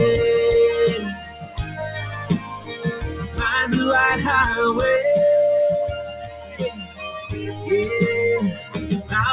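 A noise suppressor made for speech is applied to this sound throughout. It treats steady tones, ambience and decaying tails as noise. The level swings by around 15 dB as it clamps and releases, so held material pumps and thins while attacks pass.

The sound is cut by the noise suppressor five times: 1.03 to 1.81 s, down about 12 dB; 2.11 to 2.85 s, about 11 dB; 3.12 to 3.38 s, about 7 dB; 5.91 to 7.29 s, about 13 dB; and 8.54 to 8.75 s, about 10 dB. Sustained parts sink, and tails end early.

The band stops at 4 kHz, which fits the G.711 call codec.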